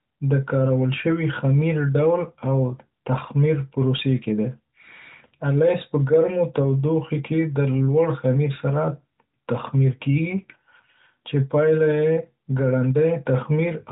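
No technical faults can be heard in this speech, which comes through an AMR narrowband mobile codec at 12.2 kbps with nothing passing above 3.8 kHz.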